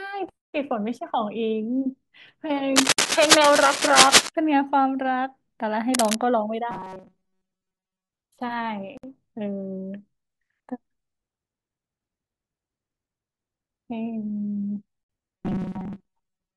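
Right at 2.76 s there's cable scratch noise, a gritty rustle riding over the speech, a bit louder than it, until 4.3 s. It's likely a worn cable or connector being moved, with the contact resistance jumping around. It comes back quieter from 5.94 to 6.15 s.

Inside that first scratch, at 2.93 s, the sound drops out for 48 ms and then resumes where it stopped. That's a gap at a join of encoded pieces: chunks encoded separately and butted together with the encoder's start delay and end padding left in. The next one hits at 8.97 s, 60 ms long, so the joins fall every 6 s.

From 6.71 to 8.09 s, and again from 15.37 s to the end, the speech turns into a rigid metallic buzz at 188 Hz. That's robotic sound from repeated short buffers. Audio likely arrived too slowly, so the player looped about 5.3 ms chunks and skipped most of the real signal.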